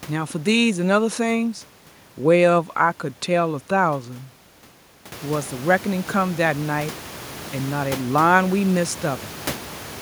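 No technical faults can be heard in this recording.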